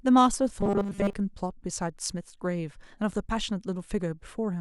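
From 0.61 to 1.13 s, new audio likely arrived too seldom, so playback repeated a tiny slice most of the time and skipped real audio. This robotic sound from repeated short buffers forces a fixed 200 Hz buzz, fitting 5 ms repeats, making the speech rigid and metallic.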